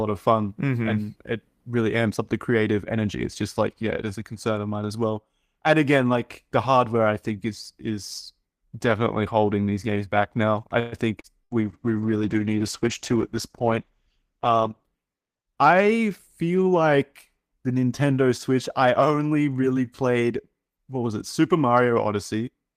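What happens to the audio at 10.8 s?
Just after "games back now I", from 10.79 to 10.95 s, the last sound smears into a brief fading buzz, then the speech resumes exactly where it stopped with nothing lost, about 127 ms later. This call audio freeze likely comes from delayed packets draining the jitter buffer.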